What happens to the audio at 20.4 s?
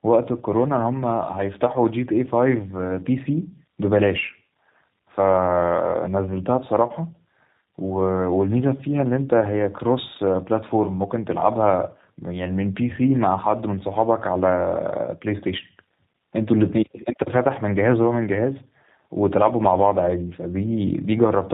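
At 20.4 s the speech sounds rough, muffled and warbly with nothing above 3.8 kHz, as throughout the clip: tandem speech coding, AMR-NB re-encoded by G.729A.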